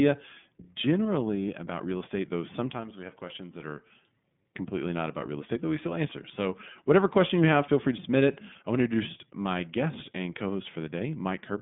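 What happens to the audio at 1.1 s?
At 1.1 s, as throughout, the speech carries plainly audible iLBC codec damage. It is band-limited to about 150 Hz–3.6 kHz and sounds rough and synthetic, consistent with independently coded 30 ms frames.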